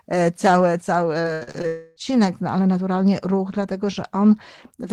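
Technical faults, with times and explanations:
1.21–1.65 s, repeated packet loss (robotic sound): just after "e cały cały", the speech breaks up into five short holes within under half a second, the longest about 78 ms. Each hole is patched by stretching the sound that came just before it, so about 40% of this span is synthetic continuation rather than real speech. Close to 180 ms of audio is simply gone, which produces the choppy, robot-like texture.
1.67–1.98 s, long network dropout: for roughly 300 ms the real speech stops and is replaced by a smeared, buzzy extension of the last sound. This stretch never drops to silence, because the filler covers almost the entire gap. The likely cause is a burst of audio that never arrived, so the receiver kept improvising until real data resumed. Speech returns at "no ale naturalnie ruch", and whatever fell inside that gap is lost.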